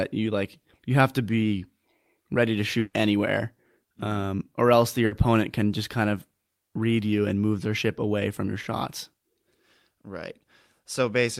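Bursts of packet loss at 2.79 s (140 ms concealed, then about 30 ms of silence) and 5.05 s (60 ms): the last sound is held and fades, and the audio resumes further on.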